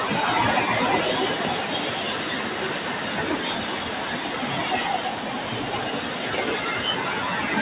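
From start to finish, a speech-tuned noise suppressor is treating these sounds as noise, dipping sustained parts and tails by around 5 dB so the audio pumps and thins, over a narrowband call path with nothing above 4 kHz.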